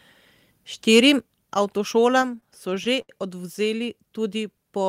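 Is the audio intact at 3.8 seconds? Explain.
Yes, the audio is intact at 3.8 s, with no dropout, click, distortion or other fault audible at that moment.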